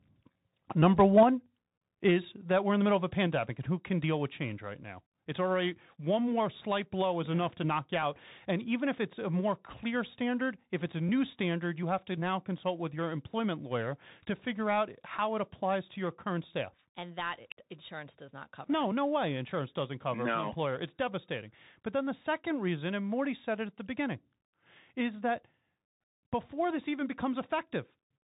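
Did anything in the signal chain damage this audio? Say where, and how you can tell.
Yes, at three stages.

The codec damage runs throughout: nothing reaches above about 3.8 kHz, s sounds come out scratchy, and a granular hiss sits under the speech. That combination fits the Bluetooth CVSD headset codec at 64 kbps, where a one-bit delta coder with an adaptive step chases the waveform and lags on steep, loud high content. A plain band-limit without the hiss and the slope-overload grit would point to filtering rather than this codec.

At the converter, from 0.82 to 1.23 s the loudest syllables pick up a harsh, crackling edge, with peaks pushed about 3 dB past full scale and a few percent of samples flattened. That is most likely microphone overload: input gain set too high, so the analogue-to-digital converter clips the tops. It differs from the CVSD grit because it is confined to this burst and is tied to peak level, not to high-frequency content.

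In call processing, the level drops abruptly at 1.23 s by about 5 dB, at 2.25 s by about 2 dB, and at 3.27 s by about 3 dB, with speech and background falling together. That pattern fits the microphone volume being stepped down by the call software reacting to the clipping. Each change lands in a single instant and then holds. A compressor or automatic gain control would ride the level with smooth attack and release instead.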